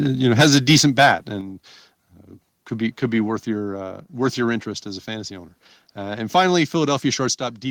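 Right from 0.32 s through about 1.12 s the speech runs into microphone overload. The loudest syllables get their tops sheared off, so you hear a gritty, crackly edge on each peak. It sounds like the input was driven roughly 7 dB past what the converter could take, likely because the mic gain was set too hot, with a few percent of the samples flattened against the ceiling.

While that's still happening, at 0.41 s, there's the first microphone volume stepped down: the whole level, voice and background together, drops by about 2 dB in one go. That's most likely the call software noticing the clipping and pulling the input gain back. It likely wasn't enough on its own, so at 1.41 s there's a bigger step of about 6 dB, and near the very end, at 7.35 s, another sudden drop of about 6 dB.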